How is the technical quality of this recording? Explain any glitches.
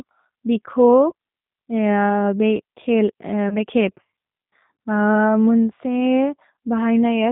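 The recording is narrowband and carries two brief dropouts, so its technical quality is limited.

Throughout the clip the speech sounds muffled, slightly rough and synthetic, with nothing present above 4 kHz. That character points to the G.729 codec, which fits an 8 kbit/s VoIP link. Rather than storing the waveform, it rebuilds speech in 10 ms frames from a vocal tract filter, a pitch predictor and a handful of pulses, and here that reconstruction is plainly audible.

At about 1.10 to 1.13 s, and again from about 3.49 to 3.57 s, the sound briefly smears into a buzzy tone or coloured noise that fades. This is VoIP packet loss concealed by the speech codec. Each gap fits one lost 20 ms packet. The decoder filled it by extending its last pitch and filter with falling gain, and because every frame builds on the previous one, the voice stays weak or distorted for a while after packets return.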